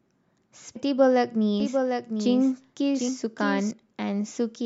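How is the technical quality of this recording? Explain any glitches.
The quality is let down by three glitches in this speech recording, of two kinds.

At 0.72 to 0.76 s and again at 3.05 to 3.09 s there is damaged data in the compressed stream. Some bytes in those frames were lost or corrupted. The decoder misreads them, loses sync and hunts for the next valid frame header. Each event is a brief disturbance, such as a chirp, squawk, click or short hole, lasting about 40 ms.

From 1.60 s to 3.71 s the recording carries a doubled audio track. A second copy of the speech runs about 0.7 s behind the first. It sits about 5 dB lower. The copy is full-band, with no decay or room colour, so it is not an echo. It switches on and off abruptly at those times. The likely cause is the audio being captured a second time by a slower path, or an edit that left two copies out of step.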